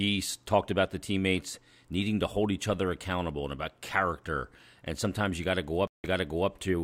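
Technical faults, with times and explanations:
5.87–6.50 s, stream reconnect: the connection drops and the speech cuts to silence for 165 ms, then a fresh decoder starts mid-stream 0.46 s earlier than the break point, so a brief stretch repeats as the server resends a burst of buffered audio.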